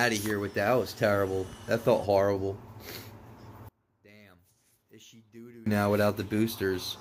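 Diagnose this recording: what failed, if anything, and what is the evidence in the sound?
From 3.69 s to 5.66 s the level falls by about 27 dB and the body of the sound largely disappears, leaving only a faint remnant before it returns to normal. That points to the likely culprit: one channel inverted, probably a swapped pair somewhere in the analogue wiring or a flipped channel in processing. When the two channels get summed to mono, everything they share cancels out, and only their small differences survive.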